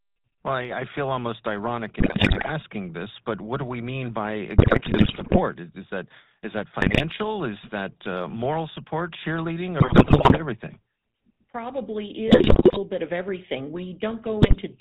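From the start the speech carries the buzzy, gravelly texture of the GSM full-rate codec at 13 kbps. The vocal tract is modelled and driven by coarse, regularly spaced pulses, so the excitation sounds rough. On a spectrogram everything stops sharply at 4 kHz, and the harmonics look smeared and grainy rather than cleanly banded.

GSM bit errors break through six times, at 2.0–2.51 s, at 4.58–5.41 s just after "do we mean by", at 6.80–7.02 s after "that is that", at 9.80–10.42 s after "uh moral support cheerleading", at 12.28–12.80 s, and at 14.42–14.61 s. Corrupted bits at rates around 6 to 8 percent distort the decoder's filter, pitch and gain values. The speech turns into squawks, pops and gargling. The waveform shows sudden level spikes, and the spectrogram shows blotchy, misplaced energy frame by frame.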